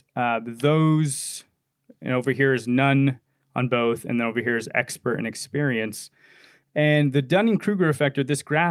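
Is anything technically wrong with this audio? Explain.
No, nothing technically wrong can be heard here.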